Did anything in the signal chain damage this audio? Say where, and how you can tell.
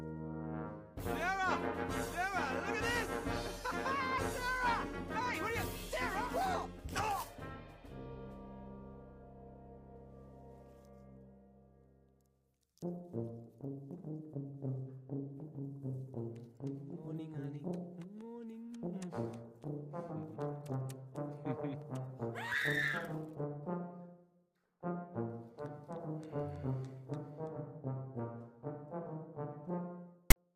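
Yes. At 30.31 to 30.36 s a hard-edged burst of loud, lopsided rasp cuts in and drops straight to silence. That is file tags played as audio at the storage stage: the decoder read a block of text tags and zero padding as samples.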